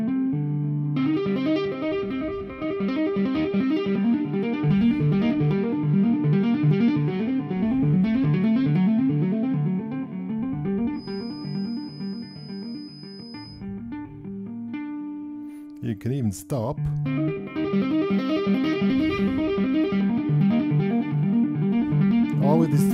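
From 10.91 s to 13.65 s a feedback whistle sits behind the sound: a thin, steady 5 kHz tone about 25 dB below the signal, swelling and fading slowly in level. The likely cause is a loudspeaker-to-microphone loop held just at the edge of feedback.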